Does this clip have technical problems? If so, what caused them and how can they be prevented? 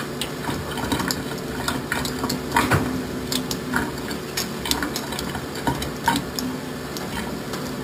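Yes. Imaging from sample-and-hold upsampling runs through the whole clip. A bright metallic fizz sits from 6 to 12 kHz, about 12 dB below the sound. It follows the sound's level, and moves opposite to its pitch. This fits 12 kHz audio raised to 48 kHz by repeating samples without smoothing. Prevent it by upsampling with a proper low-pass interpolation filter.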